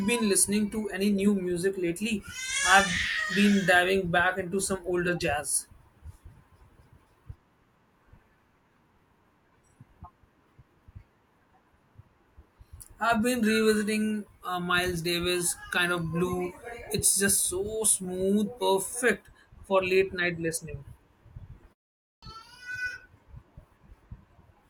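At 22.06 s the output device had dropped into a low-power state during the 0.4 s pause before it, and it had not finished waking and relocking when the signal resumed. The result is a clipped start after a pause: the first 165 ms of speech, up to 22.23 s, is swallowed, so the next word bursts abruptly out of silence with its opening sounds missing.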